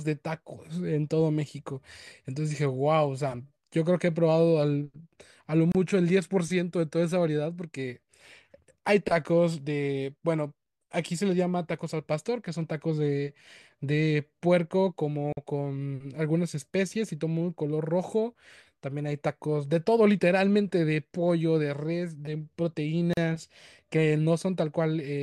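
Speech drops out briefly at 5.72 s, 15.33 s and 23.13 s, for 30, 47 and 38 ms. Each is a gap at a join of encoded pieces. Segments were joined untrimmed, keeping encoder delay and end padding. Edges are smeared by the codec. Speech resumes where it stopped.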